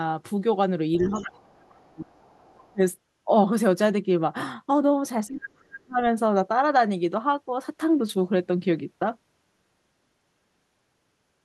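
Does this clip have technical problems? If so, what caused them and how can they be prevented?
Yes. Speech suppressed in double talk happens from 0.99 to 2.2 s, briefly at 2.72 to 2.81 s, and again from 5.28 to 6.0 s. The speech dips hard, by around 35 dB at its worst. The likely cause is the echo canceller failing to separate the talker from the far-end echo while both spoke, so it turned everything down. Better double-talk detection in the canceller, or using headphones, would prevent it.

The other side's voice leaking through shows up at 1.01 to 1.27 s, 1.54 to 1.71 s and 2.18 to 2.72 s as a second voice under the talker. It's about 20 dB down in the first stretch and much fainter after that. That's likely leftover loudspeaker sound the echo canceller didn't fully remove. A headset, or better-tuned echo cancellation, would keep it out.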